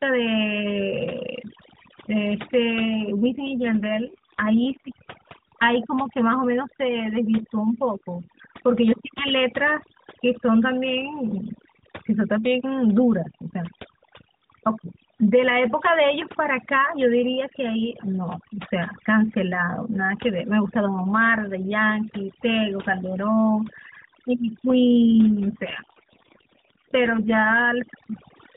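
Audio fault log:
Throughout: overdone noise removal. Noise reduction set too strong suppresses any band near the estimated noise floor, so the background drops and breaks into twinkling specks and quiet parts of the speech are cut away with it. On a spectrogram, the gaps show scattered isolated dots and the weak harmonics are ragged and patchy.
3.17–4.96 s and 24.68–27.56 s: AMR rate drop. In both stretches the speech turns rougher and more synthetic, with the same bandwidth and no gap, which fits the mobile codec stepping down from 12.2 to about 5.9 kbps. The spectrogram keeps its ceiling below 4 kHz, but the harmonics look smeared and coarser until the rate recovers.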